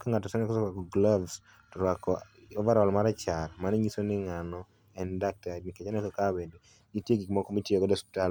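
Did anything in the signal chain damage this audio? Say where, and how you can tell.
No, nothing in this speech recording stood out on listening as damage from any stage of the signal chain.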